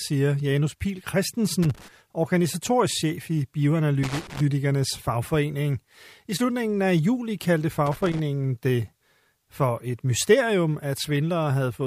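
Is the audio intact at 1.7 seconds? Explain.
No, 1.7 s falls inside a burst of loose connector crackle from about 1.63 to 1.88 s, where a bad contact keeps breaking the signal, giving irregular scratchy crackling.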